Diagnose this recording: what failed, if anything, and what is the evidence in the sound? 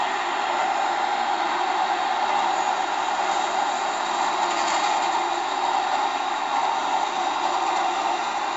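The fault is at the codec stage: 4-bit ADPCM compression across the whole recording. A gritty hiss rides on every loud passage and rises and falls with the level, and sharp attacks come out distorted because the adaptive step size lags behind sudden jumps. The damage is heavy. Nothing is present above 7.7 kHz, which points to a low sample rate near 16 kHz and fits a 64 kbps stream at four bits per sample.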